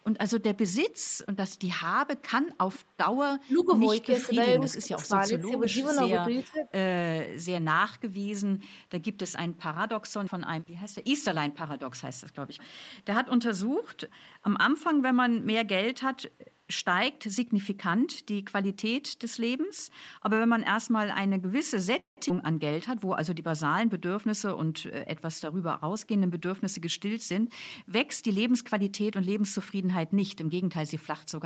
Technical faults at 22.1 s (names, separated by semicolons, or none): call audio freeze